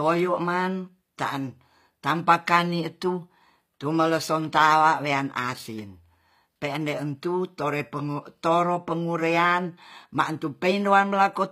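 From start to finish the speech has a brittle, gritty top end: s sounds come out lispy and metallic, and nothing is heard above about 15.4 kHz. This is likely HE-AAC compression, plainly audible here and consistent with HE-AAC v2 at a bitrate around 24 kbps. Only the lower spectrum is truly coded; the treble is copied up from lower bands, so its harmonics never quite align with the real ones.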